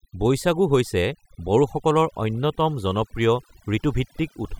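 A speech recording with overdone noise removal running the whole way through. The denoiser was pushed too hard, so any frequency band that sits close to its idea of the noise gets pulled way down or cut out entirely, and the softer parts of the voice get swept away with it. You end up with a background that drops away and breaks up into little twinkling, warbling specks.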